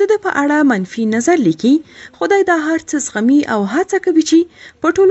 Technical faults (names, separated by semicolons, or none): none